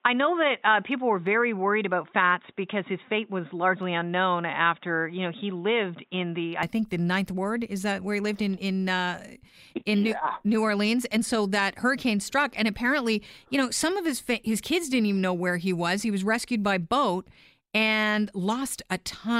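Input switched to a poorer device, from 0 to 6.63 s: this speech recording starts dull and boxy, with nothing above 3.8 kHz and a faint added noise floor, then opens up with no gap or level jump just before "think the ninth ward", likely a narrowband headset or microphone giving way to the proper input.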